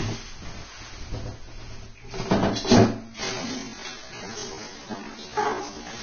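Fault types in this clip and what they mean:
Vorbis compression: Throughout, the audio is hissy and grainy, with blurred attacks. This likely comes from heavy low-bitrate Vorbis coding, which fits around 19 kbps, where treble detail is quantised so coarsely it turns to noise.
Doubled audio track: From the start to 2.74 s, a second full-band copy of the sound trails roughly a tenth of a second behind at about equal level. This is likely a duplicate capture path or misaligned edit. It lacks any room decay and cuts off abruptly.
Time-stretched section: From 3.03 s to the end, the pace suddenly drops to about 0.55 times normal speed while pitch holds steady, so the sound drags. This is likely software stretching, which keeps pitch by repeating short overlapping pieces of audio.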